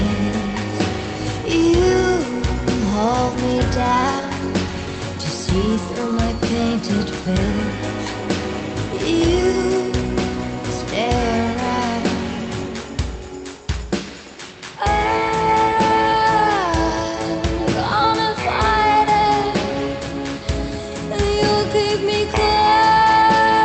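Nothing here goes wrong at any point; the sound tops out around 8 kHz as it passes through the call path, as you'd expect from a wideband call codec such as Opus, with nothing breaking up or dropping along the way.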